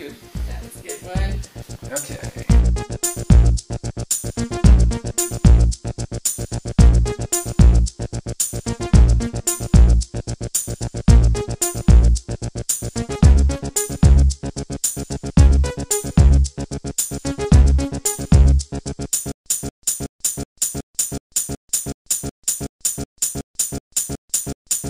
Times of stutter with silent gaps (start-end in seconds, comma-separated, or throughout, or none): 19.32-24.89